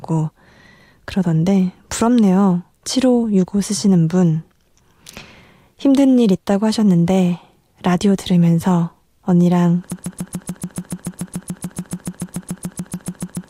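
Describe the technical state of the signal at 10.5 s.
The playback or stream has likely stalled, resending the last fragment it held: a broken-record loop running from 9.92 s to the end. At 10.5 s, a 144 ms slice of speech repeats exactly, back to back, about 25 times, replacing whatever should have followed.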